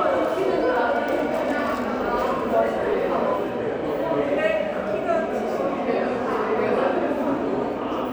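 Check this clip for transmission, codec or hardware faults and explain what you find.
There's one fault, a repeated buffer at about 2.93 s. New audio didn't reach the device in time, so it replayed the last chunk it had, which points to a buffer of about 5 ms, two extra times. That short slice plays three times in a row with a hard join at each seam. Because the chunk is so small, it comes across as a quick click or tiny buzz rather than an audible stutter, and essentially none of the audio is lost.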